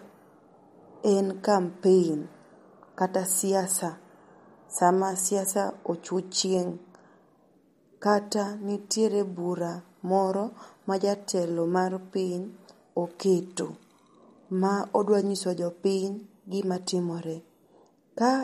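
From start to finish the speech carries plainly audible MP3 compression. Nothing comes through above about 15.1 kHz, so the treble stops at a hard ceiling. The sound is watery and swirly. Sibilants pick up a metallic chirp. Consonant attacks smear rather than snap. The likely cause is a low bitrate, around 48 kbps. With so few bits, the encoder drops the top band and zeroes faint frequency lines, which flicker on and off between frames.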